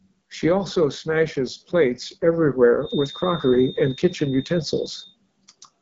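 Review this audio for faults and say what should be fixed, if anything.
The whole clip is carried through the AMR wideband (HD Voice) codec, and the damage is plainly audible: the speech sounds rough and raspy rather than clean, which fits one of the codec's two lowest modes, around 8.85 kbit/s. Below 6.4 kHz the speech is rebuilt from a pulse-excited vocal tract model, and the band above is filled with shaped noise. On a spectrogram there is nothing above 7.6 kHz, and the upper band looks smeared and grainy rather than showing harmonic detail. To prevent it, run the link at 12.65 kbit/s or higher.

From 2.79 s to 5.17 s a thin, steady feedback whistle sits behind the speech at 3.7 kHz, roughly 20 dB below it and slowly swelling and fading in level. The likely cause is a loudspeaker-to-microphone loop held just at the edge of feedback, so that one frequency keeps ringing without building up. 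A spectrogram shows a single bright horizontal line at 3.7 kHz over that span, while the waveform barely changes because the tone is so much quieter than the speech. To prevent it, lower the monitor gain, separate or aim the speaker away from the microphone, or notch 3.7 kHz.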